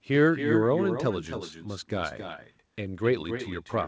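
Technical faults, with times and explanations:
Throughout, echo with no canceller: a thinner copy trails each phrase about 7 dB down and roughly 300 ms late, as far-end loudspeaker sound re-enters the microphone unremoved.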